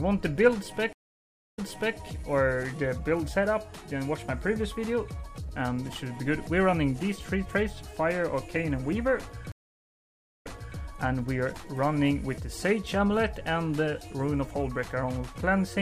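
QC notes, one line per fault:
0.93–1.97 s and 9.52–10.79 s, stream reconnect: the connection dropped twice, leaving dead air of 0.59 s and 0.85 s. Each time the player reconnected, started a fresh decoder mid-stream, and the server resent a burst, so the audio picks up about 0.44 s and 0.42 s earlier and briefly repeats material. On the waveform each gap is a flat line with a short fade-in at the restart. On the spectrogram it is a blank vertical band followed by a repeated stretch.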